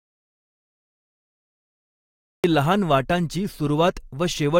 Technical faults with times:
0.00-2.44 audio dropout to silence

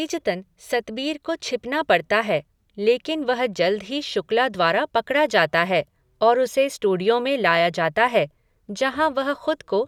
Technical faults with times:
none

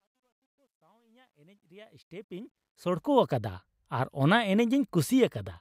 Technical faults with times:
0.00-3.37 truncation distortion on a fade

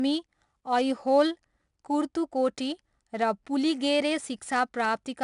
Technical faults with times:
0.00-5.23 4-bit ADPCM compression

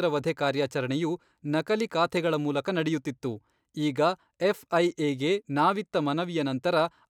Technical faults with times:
none

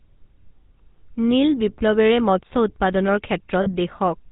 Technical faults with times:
0.00-4.31 GSM full-rate codec
3.62-3.69 lost GSM frames

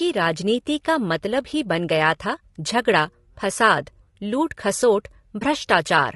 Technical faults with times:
0.00-6.15 low-delay AAC compression
5.39-5.42 AAC frame loss with muting

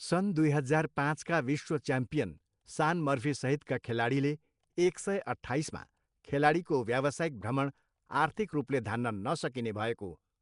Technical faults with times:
0.00-10.41 Nellymoser compression
3.83 pre-echo

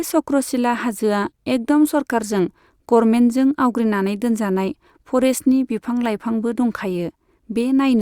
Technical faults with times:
none

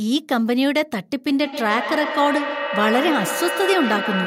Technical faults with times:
1.28-4.26 feedback echo between two devices

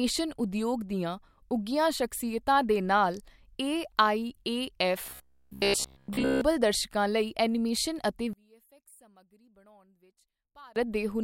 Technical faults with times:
5.06-6.41 robotic sound from repeated short buffers
8.33-10.76 one channel inverted

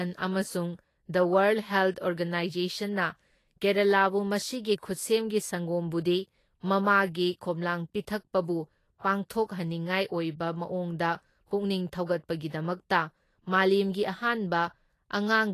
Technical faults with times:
0.00-15.54 Vorbis compression

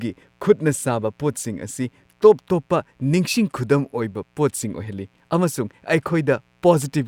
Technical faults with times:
0.00-7.08 mains buzz

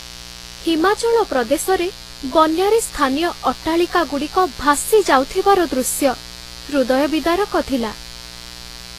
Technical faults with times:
0.00-8.98 mains buzz
0.00-8.98 transcoding between lossy codecs

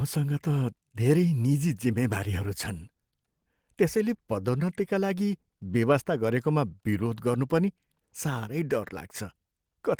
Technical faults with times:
none

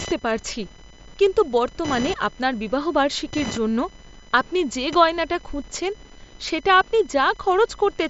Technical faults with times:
0.00-8.09 computer activity noise

